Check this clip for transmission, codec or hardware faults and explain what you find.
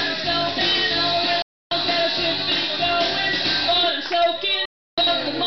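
Two digital broadcast dropouts interrupt the sound. At 1.42 s it snaps to silence within about 3 ms and stays gone until 1.72 s. At 4.65 s it cuts again the same way and returns at 4.98 s. The receiver stopped getting valid frames, either because it lost the signal or because frames failed their checksums, so it muted until clean frames arrived. Each hole of about 290 ms and 320 ms fits roughly nine or ten lost frames, and whatever was transmitted during those gaps is gone for good.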